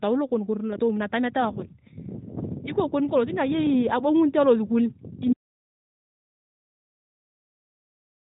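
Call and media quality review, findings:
Brief dip in the speech at about 0.74 to 0.80 s, then recovery. Lost AMR speech frames: a single 20 ms frame failed its checksum, and the decoder patched the gap by reusing the previous pitch and vocal tract parameters at reduced gain.

Speech cuts out abruptly at 5.33 s into dead digital silence, with no room tone, through to the end of the clip. Audio dropout to silence: the input was likely lost upstream, with the encoder writing silence thereafter. Speech content after the cut is gone. Nothing passes above 4 kHz, with only light coding colour, as expected from the AMR narrowband path.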